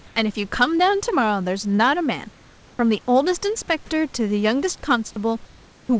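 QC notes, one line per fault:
0.78–0.80 s and 1.76–1.79 s: short concealed packet loss. Each time, about 20 ms of the call reached the decoder too late. The receiver carried the preceding speech forward to fill the gap, then blended back. Each one sounds like a brief smear or wobble.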